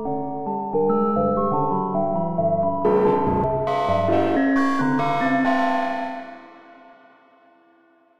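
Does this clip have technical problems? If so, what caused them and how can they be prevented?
No, this clip has no technical problems, so there is nothing to prevent.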